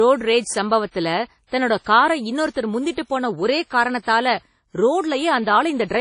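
Throughout the speech, a low-bitrate transform codec, likely WMA compression, has discarded detail: nothing survives above 10.1 kHz, and smeared quantisation noise leaves an audible ringing, washy quality, with hiss that swells and fades alongside the voice, fitting roughly 32 kbps.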